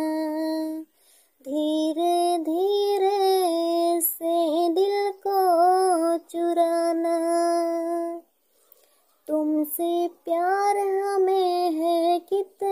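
No technical faults occur in the clip, so there are none to describe in time order.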